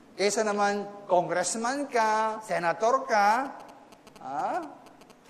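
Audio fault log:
3.45–5.12 s, GSM signalling bursts: a nearby 2G phone's radio bursts get rectified, giving galloping ticks and a 217 Hz buzz, roughly 20 dB under the audio.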